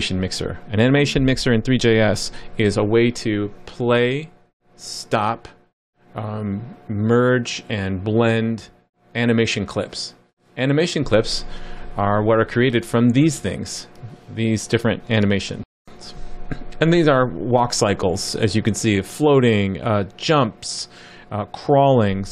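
At 15.63 s the sound cuts out abruptly in mid-flow and the output falls completely silent for about 0.24 s, resuming at 15.88 s. This is a playback stall: the gap is long enough to register as a distinct hole rather than a click. The likely cause is the player running short of data, or its playback thread being briefly blocked, so nothing reached the output until it recovered and continued.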